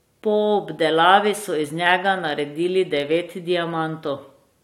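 Speech, with no technical faults audible anywhere.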